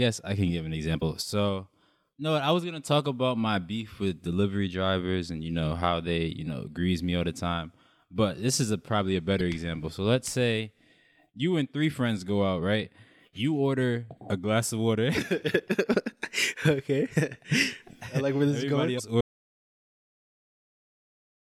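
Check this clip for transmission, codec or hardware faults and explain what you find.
The clip has two faults: damaged data in a compressed stream, heard three times, and a dropout to silence at the end.

Damaged data in a compressed stream hits at 0.98–1.02 s after "I can give an", at 9.37–9.41 s after "is a probably a", and at 18.95–19.00 s. Corrupt bytes make the decoder misread frames and hunt for the next header. Each event is brief, about 40 ms long.

An audio dropout to silence starts at 19.21 s and runs to the end. The speech cuts off mid-flow into silence, with no room tone. The likely cause is a lost input, with the recorder writing silence afterwards.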